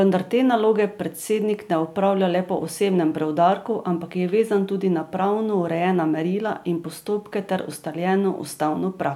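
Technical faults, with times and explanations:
No technical faults can be heard anywhere in this recording.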